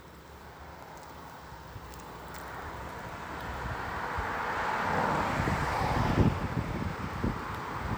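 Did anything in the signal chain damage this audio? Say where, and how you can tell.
No, nothing damaged this audio.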